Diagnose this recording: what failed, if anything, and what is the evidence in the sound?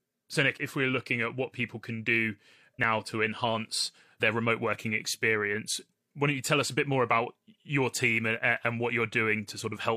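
Overlap between stream segments at the network/streaming stage: at 2.84 s the speech jumps with a tiny skip as roughly 30 ms vanishes at a 4-second segment boundary, with no silent gap, unlike a dropout.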